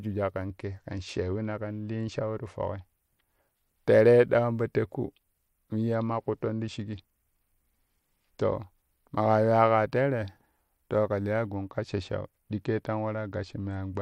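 Three stretches of this speech sound like a Bluetooth SBC bit pool drop: 0.45 to 2.96 s, 5.94 to 8.55 s, and 11.49 s through to the end. Each time the treble goes dull and a gritty, grainy noise creeps in, which fits the link being squeezed from a bit pool of 31 down to 11, around 83 kbps. With that few bits the top sub-bands get starved and the rest are coarsely quantised, until the rate climbs back.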